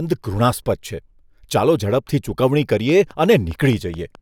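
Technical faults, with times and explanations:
2.90 to 4.16 s, train of clicks: a regular ticking of about seven sharp pops, close to 4.8 per second, cuts across the speech and the gaps between phrases, each click peaking at about the level of the speech. On a waveform they are evenly spaced narrow spikes; on a spectrogram, thin vertical lines running through all frequencies. Their near-identical shape and steady spacing point to likely interference from nearby equipment or a faulty connection or power supply.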